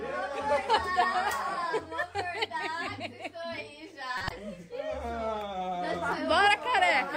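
Short chirping bursts of noise interrupt the audio at 4.18–4.31 s and 6.12 s: corrupt frames decoded despite bit errors, scattering energy into wrong frequencies.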